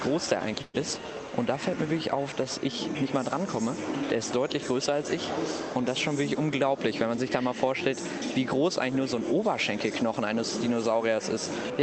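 At 0.61 s a burst of packet loss interrupts the sound for about 120 ms, until 0.77 s. The receiver covers the gap by stretching the last sound it had, which becomes a held buzz or thinning hiss that fades, and then playback jumps ahead. The waveform shows an envelope tapering smoothly instead of dropping to silence. On a spectrogram, frozen, blurred horizontal bands fade out, then the detail resumes abruptly, all beneath the call path's cut-off near 8 kHz.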